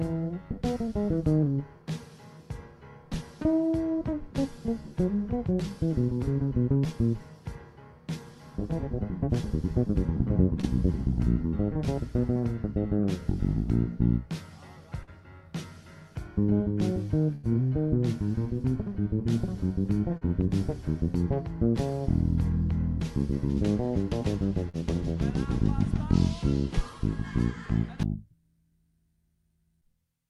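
At 10.61 s and 15.03 s there is short concealed packet loss: about 20 ms and then 40 ms of audio failed to reach the decoder in time. The receiver bridged each hole by extending the preceding sound and blending back, leaving a brief smear or wobble. At 17.35 s a burst of packet loss cuts out about 80 ms. The receiver stretched the last sound across the gap while fading it, so a held buzz or thinning hiss replaces the audio, which resumes with that stretch missing. The same short concealment recurs at 20.17 s and 24.69 s, each covering about 40 ms and heard as a momentary wobble.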